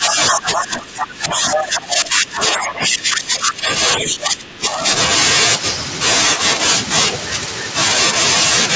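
A speech recording in which the talker's voice sinks, dropping by roughly 15 dB at its deepest, from 0.0 to 3.69 s and again from 3.98 to 4.87 s. This is likely speech suppressed in double talk: with both ends speaking, the echo canceller could not tell the talker from loudspeaker echo and attenuated everything. Brief scraps of another voice cut through at 0.07–0.13, 0.32–0.37, 0.54–0.62, 1.52–1.60 and 3.44–3.52 s, mostly a little below the talker and about level with the talker at 1.52 s. That is the other side's voice leaking through, likely loudspeaker sound the canceller failed to remove from the microphone. The whole clip carries nothing above 8 kHz, through the call's normal microphone processing.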